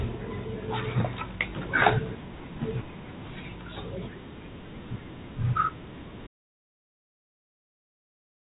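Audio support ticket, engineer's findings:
Input path likely lost at 6.27 s (device disconnect, link failure or mute), with the encoder continuing to write silence. Audio dropout to silence from 6.27 s to end: speech cuts off mid-flow, no room tone, content unrecoverable. G.711 A-law telephone band unaffected before cut.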